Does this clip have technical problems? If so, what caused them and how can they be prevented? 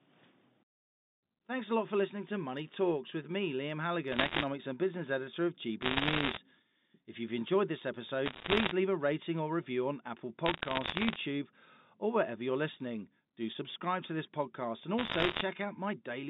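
Yes. Bit errors on a digital phone line crackle at 4.12–4.44, 5.82–6.38, 8.26–8.71, 10.46–11.16 and 14.98–15.41 s: flipped bits, around one or two percent, corrupt individual G.711 samples into sharp ticks over the narrowband 0.15–3.7 kHz speech. Prevent them with clean line transmission, error checking or redundancy on the link.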